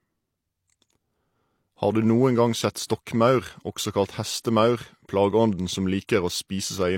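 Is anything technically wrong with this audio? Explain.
Yes. Throughout the speech there is low-bitrate audio saved at a high bitrate. The file is likely a low-bitrate encoding, possibly an HE-AAC stream around 32 kbit/s, later re-encoded as a high-rate MP3. The second pass cannot restore what the first discarded. Nothing remains above 16.3 kHz, and the coarse coding artefacts of the original encode survive intact, so the file sounds no better than its low-bitrate source despite its size.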